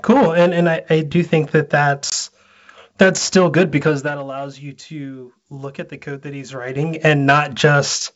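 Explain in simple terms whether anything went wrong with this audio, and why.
Packet loss on an ADPCM call struck just after "I do think that", at 2.10 to 2.13 s: about one packet, some 20 ms, went missing. The decoder lost track of the sender's prediction, so a hard-edged gap appears and the speech comes back slightly off before settling.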